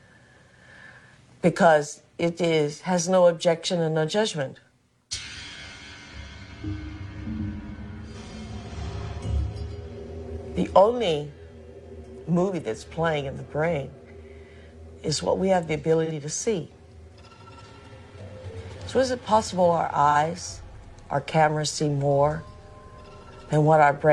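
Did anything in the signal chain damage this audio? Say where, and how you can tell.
Yes. AAC frame loss with concealment occurs at the codec stage, at 16.05–16.12 s and 20.10–20.16 s. Each 42.7 ms dropout fits a single lost AAC frame, which the decoder patched from the last good spectrum. The result is a brief smeared, noisy or phasey patch.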